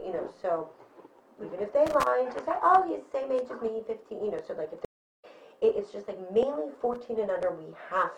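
From 1.87 to 2.07 s, and again from 6.74 to 6.96 s, a burst of loose connector crackle: a worn contact making and breaking chops the signal into irregular scratchy crackle. Unlike regular digital glitching, these bursts have no steady rhythm.

At 4.85 s a stream reconnect cuts the sound to silence for about 0.38 s. Playback returns at 5.25 s on a fresh decoder, roughly a third of a second further on. A simple dropout would resume where it stopped, but this one skips ahead.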